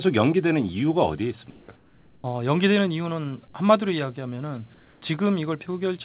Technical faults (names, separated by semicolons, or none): comfort noise in place of the background